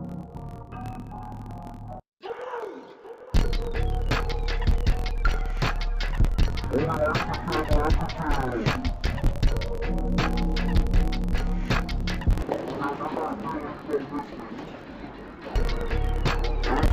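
Interleaved audio read as planar runs from start to finish. Each block of about 23 ms, which fits a 1024-sample block, holds alternating left and right samples, but the first half is taken as left and the second half as right. Each half is stretched across the whole block, so the sound drops a full octave while keeping its overall pace, and it comes out doubled and choppy, restarting about 43.1 times per second.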